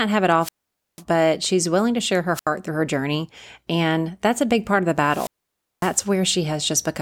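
Wireless microphone squelch dropouts occur three times. Each time the radio signal fades, hiss rises briefly, and the receiver's squelch mutes the output. The first runs from 0.39 to 1.03 s, after "have it", with a hole of about 0.50 s before "but she's willing to". The second is short, 2.33 to 2.48 s, after "willing to share her", muting 76 ms before "through her journey". The third spans 5.01 to 6.02 s, after "big part of the", with a 0.55 s hole.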